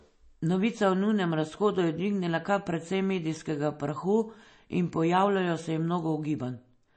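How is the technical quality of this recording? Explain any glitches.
Quality is poor because of one fault that lasts the whole speech clip. The sound is swirly and watery with nothing above 8.3 kHz, likely MP3 compression at a bitrate around 32 kbps. Unlike a plain low-pass filter, faint detail flickers from frame to frame.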